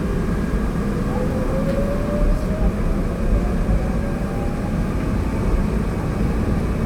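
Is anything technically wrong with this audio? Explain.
No, nothing technically wrong turns up in this recording of everyday sounds; it all comes across just as it should.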